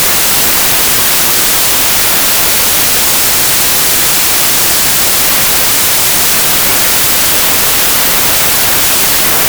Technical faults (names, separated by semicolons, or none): wrong sample width